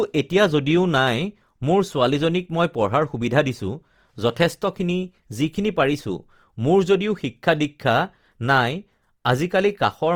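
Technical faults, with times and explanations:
Throughout, Opus compression. The speech sounds grainy and rough, with a noisy, hashy texture in place of clean tone. The damage is plainly audible across the whole clip. The high end stays open, reaching to about 20.3 kHz, so the sound is not muffled. This is likely Opus in its music mode, keeping each band's energy but filling the detail with folded or noise content. That fits a low bitrate of around 24 kbps.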